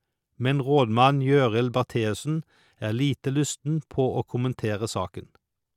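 No technical faults can be heard anywhere in this speech recording. Nothing in the audio needs a timestamp or a note of any kind.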